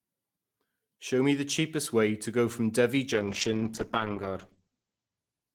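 From 3.19 s to the end of this speech recording, the sound turns rough and muffled. The top end is cut off at about 8 kHz where it had reached 20 kHz, and a coarse, watery texture sits at its worst for about 1.5 s. This is a call bitrate drop. The call's bandwidth estimate fell, so the encoder was given far fewer bits, consistent with a fall from around 32 kbps to roughly 9 kbps. It codes more crudely and trims the highs, and the bitrate does not recover before the clip ends.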